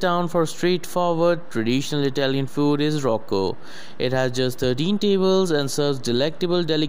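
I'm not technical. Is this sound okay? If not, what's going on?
No, there is one problem, and it runs through the whole clip from start to finish. It is called a DC offset. The entire sound wave has been pushed slightly to one side of its normal resting point, as if the whole thing were sitting on a small step. You cannot hear it directly. But it wastes some of the room the recording has before it distorts.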